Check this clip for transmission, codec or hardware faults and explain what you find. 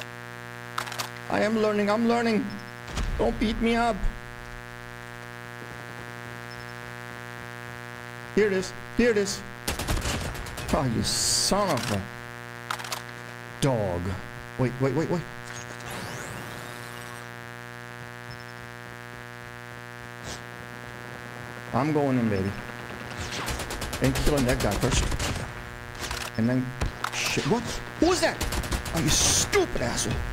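There is one hardware fault: mains buzz throughout. Switching spikes from 60 Hz power leak into the signal path, leaving a steady, raspy buzz roughly 15 dB below the audio.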